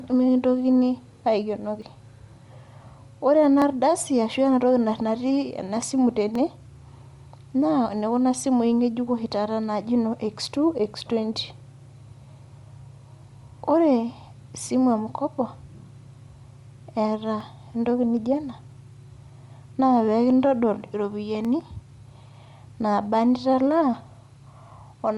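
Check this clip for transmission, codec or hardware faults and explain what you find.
Two kinds of fault are audible: a codec coloration across the whole speech clip and a series of isolated clicks.

Bluetooth LC3 compression runs throughout. The upper frequencies sound breathy and grainy, with a plainly audible noisy edge on the speech. The likely cause is LC3 coding with 7.5 ms frames, at a rate that fits about 48 kbps, replacing much of the top band with shaped noise.

Dropped samples occur at 1.82, 3.62, 4.98, 6.35, 11.01, 17.41, 18.72 and 21.45 s. Each is a single sharp click, a thin vertical line across the spectrum. The likely cause is under a millisecond of missing audio, which makes the waveform jump abruptly between values.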